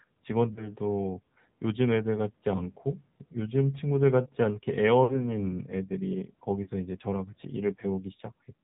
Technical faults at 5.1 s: AMR narrowband mobile codec; lost AMR speech frames

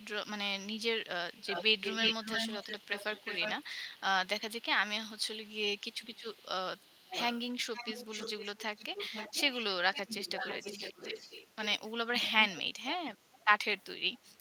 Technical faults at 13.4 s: echo leak

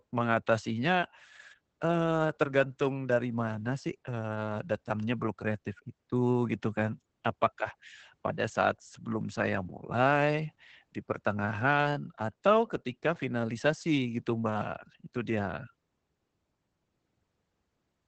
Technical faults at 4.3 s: Opus voice compression

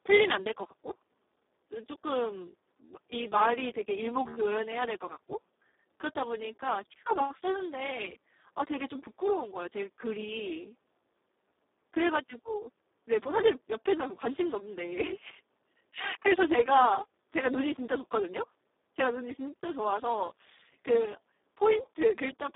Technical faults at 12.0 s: Speex codec

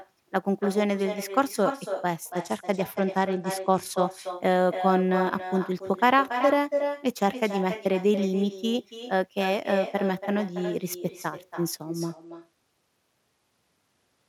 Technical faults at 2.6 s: echo with no canceller; Bluetooth SBC bit pool drop

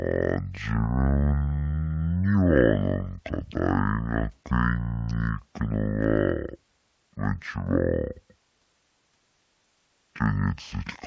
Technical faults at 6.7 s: wrong sample rate

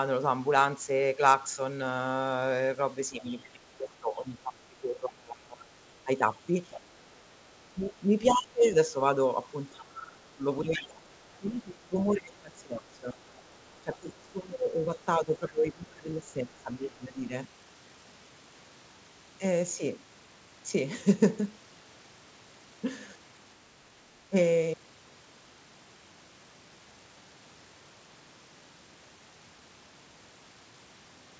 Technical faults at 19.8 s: none

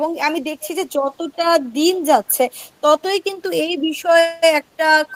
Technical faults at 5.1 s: echo leak

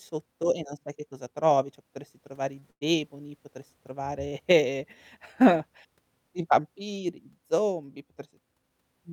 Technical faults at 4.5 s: none

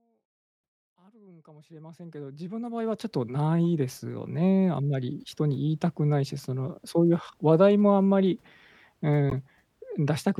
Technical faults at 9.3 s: corrupt frame decoded

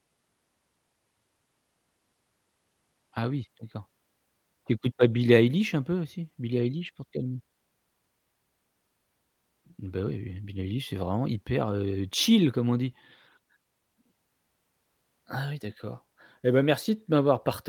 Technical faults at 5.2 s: none

